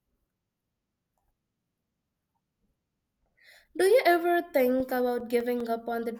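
Right after "you ever", from 4.6 to 5.6 s, CD scratch ticks appear: six brief clicks, about six per second, the longest about 3 ms. A blemish defeats error correction once per disc turn. The spectrogram shows thin vertical broadband lines, and the waveform tiny glitches.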